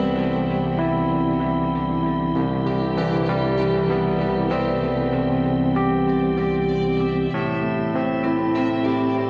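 Nothing stood out as a technical problem on listening to this recording.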